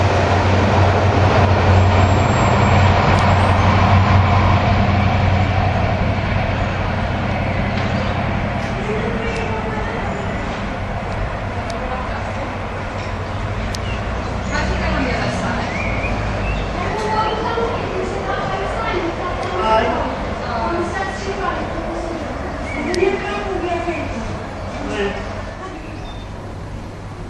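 No technical faults can be heard anywhere here.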